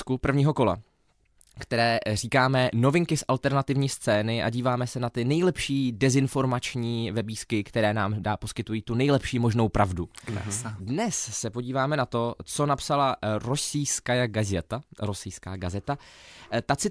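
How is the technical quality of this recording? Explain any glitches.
No glitches or technical faults are audible anywhere.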